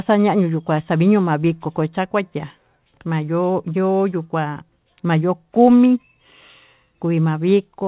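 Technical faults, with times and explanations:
No technical faults are audible anywhere in the speech.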